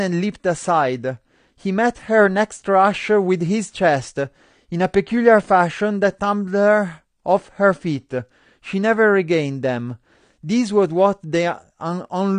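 The speech sounds dull and smeared from start to finish, with nothing above about 9.6 kHz, so the top of the sibilants is missing and what remains of them has a fizzy, warbling edge. That points to AAC compression, likely AAC-LC at a low bitrate in the region of 32 kbps: the encoder has lowered its cut-off and starved the upper bands of bits, leaving holes and smearing across its frames that are plainly audible.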